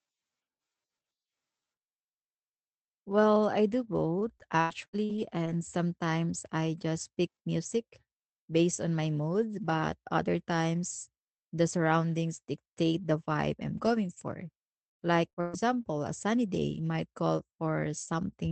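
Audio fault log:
4.19–5.49 s, repeated packet loss (robotic sound): four brief gaps, longest 80 ms, each patched by extending the previous sound, giving choppy texture rather than one dropout.
14.89–15.57 s, repeated packet loss (robotic sound): four gaps again, longest 121 ms, concealing about two-fifths of the stretch, so it sounds more broken and robotic than a single cut.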